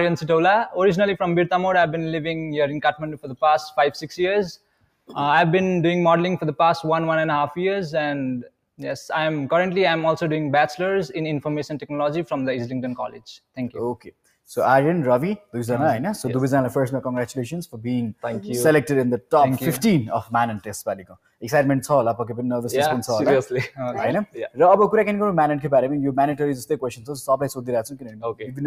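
A speech-tuned noise suppressor left running on this sound makes the level swing by a few decibels, because it mistakes steady, sustained parts for noise. Unlike compressor pumping, sudden attacks mostly pass through. The sound cut by the noise suppressor is clearest at 2.94–3.39, 4.57–5.11, 13.09–13.27, 13.97–14.32, 20.95–21.42, 24.26–24.59 and from 27.9 s to the end. There, held or fading material sinks by about 14 to 18 dB rather than dropping out as a gap would.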